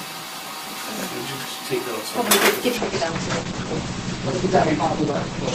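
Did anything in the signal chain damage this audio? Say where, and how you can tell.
Yes. From 2.77 s to the end, the treble suddenly vanishes above 8.5 kHz without any gap: an adaptive stream switching to a lower bitrate in the network or codec stage, consistent with Opus dropping to about 12 kbit/s.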